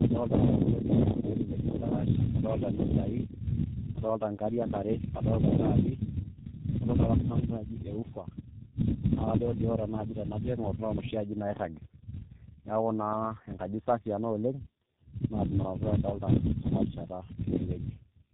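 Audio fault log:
Throughout: tandem speech coding. The speech sounds rough, muffled and warbly, with nothing above 3.9 kHz. This fits three speech coders in a row, probably CVSD, AMR-NB and low-rate G.723.1, each re-encoding the previous one's degraded output, so their artefacts stack.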